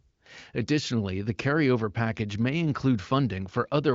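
Speech carried over the AMR wideband (HD Voice) codec at 23.05 kbit/s, bandwidth topping out near 7.6 kHz as that path allows, with no technical faults to report.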